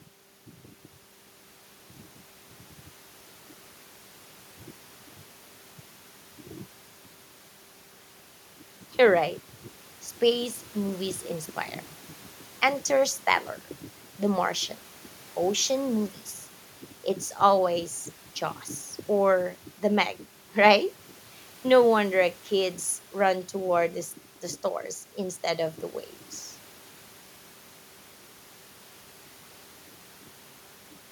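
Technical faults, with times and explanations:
No technical faults can be heard in the speech. Nothing in it calls for a time or an explanation.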